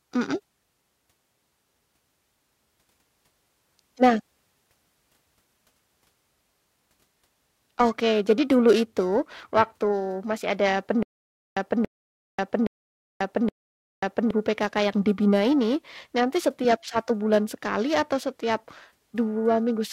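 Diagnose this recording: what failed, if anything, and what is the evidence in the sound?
The converter's clock is being shaken by periodic clock jitter at about 1 kHz throughout the speech. That timing wobble puts sidebands roughly 1 kHz either side of every component, strongest on high frequencies, giving a rough, metallic edge that disappears in the pauses.

From 11.03 to 14.31 s, just after "itu waktu masih ada", there is a stutter with silent gaps, likely a stalled player or stream buffer retrying. A 282 ms fragment plays four times, each followed by 538 ms of digital silence, repeating every 820 ms. The speech that belonged there is lost.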